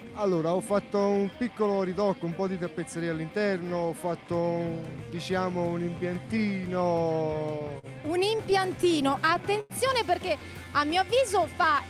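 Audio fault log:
7.59–7.64 s and 7.79–7.86 s, short stall from a late packet: two packets arrived late and the jitter buffer emptied. The last sound was held for 20 ms and 44 ms, then resumed with nothing lost.
8.37–9.73 s, repeated stalls (stutter): packets kept arriving late, emptying the buffer eight times. Held sound fills 172 ms, about 13% of the span, with the longest gap at 94 ms, so the audio drags and stutters.
10.64–11.06 s, jitter buffer slow-down: the receiver repeated single pitch periods or pause fragments to build a reserve, adding 53 ms. Playback runs at 89% speed at unchanged pitch, drawing sounds out.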